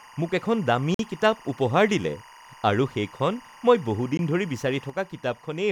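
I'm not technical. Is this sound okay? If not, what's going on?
No. A steady chirping warble sits behind the speech throughout. This is timecode bleed: a timing signal from a nearby cable, switching between pitches near 1 and 2 kHz, leaking in.

There are two brief gaps of silence, a Bluetooth stall each time. One runs from 0.94 to 0.99 s, between "মোক এখন দামী" and "কিতাপ উপহাৰ দিলে আৰু". The other comes at 4.17 s, after "আৰু সেইখন মই বহু". The sound likely paused while wireless headphones waited for delayed data.

From 4.90 s to the end, the sound abruptly gets noticeably quieter. This is one channel dropping out, likely because one side of the stereo signal was lost.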